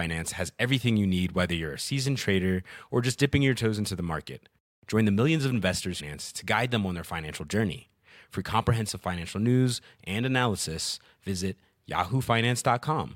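At 5.99 to 6.01 s the speech jumps abruptly forward with a brief blip, likely a stream segment skipped, where a failed segment was dropped and playback resumed at the next.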